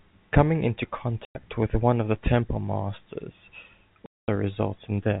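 A speech recording carried over a narrowband telephone path, interrupted twice by packet loss filled with silence. The sound drops out from 1.25 to 1.35 s, a 100 ms hole, and again from 4.06 to 4.28 s, a 220 ms hole. Both gaps are whole multiples of a short frame, which fits 10 ms packets, and the receiver inserted digital silence in their place, so each gap starts and ends on a hard edge.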